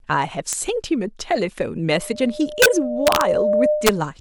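A violent crack at 0.53 s marks integer overflow: a peak reaching the integer limit wrapped to the opposite sign instead of being held there. From 1.94 s a steady 602 Hz tone swells over about a second and a half into a squeal roughly 5 dB above the speech, lasting until 4.10 s. This is loudspeaker feedback squeal, where the microphone re-amplifies its own loudspeaker output until that frequency runs away. Over it, more overflow cracks hit at 2.62–2.66 s and 3.07–3.21 s, each driven about 2 dB past the limit, and at 3.87–3.89 s, about 3 dB past.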